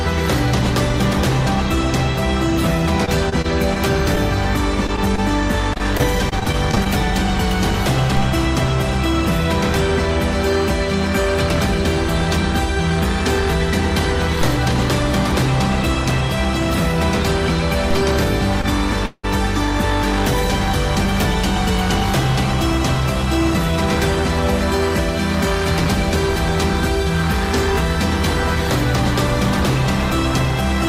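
From 3.05 to 3.78 s, repeated packet loss (robotic sound) punches four holes, none longer than 25 ms, into the audio. Each is patched by extending the preceding sound, so the passage turns choppy, with pieces missing, instead of just briefly smeared.

Short concealed packet loss follows at 4.87 to 4.90 s and again at 5.16 to 5.19 s. Each is a single 20 ms hole filled from the last sound and heard as an isolated brief smear or wobble, not a sustained robotic run.

Repeated packet loss returns from 5.73 to 6.87 s, with ten gaps of up to 26 ms and about 16% of the stretch concealed. The result is the same choppy texture.

A DC step occurs at 8.17 s, where the waveform's zero line jumps with a low thump and then returns at 14.41 s. A second step at 17.91 s holds to the end. The sound itself continues unchanged, since nothing is lost or stretched.

At 18.61 to 18.66 s, a short stall from a late packet holds the sound for 22 ms with a faint buzz while it waits. 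Nothing goes missing.

From 19.06 to 19.25 s, the sound hangs as a fading buzz lasting about 0.2 s, ending in 30 ms of silence, then resumes exactly where it stopped. This call audio freeze is likely from packets held up in transit emptying the jitter buffer. It is far longer than the stall.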